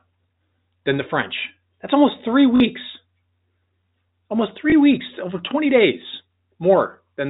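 Packet loss with last packet repeated occurs at 2.56 to 2.60 s, just after "almost three", and again at 4.70 to 4.72 s, just before "weeks over". At each gap the receiver filled the missing audio by replaying the last packet it had received. The 40 ms gap, which fits two 20 ms packets, repeats with a brief 50 Hz buzz. The 20 ms gap is a single small blip. Both sit within the narrow telephone band of the G.711 line.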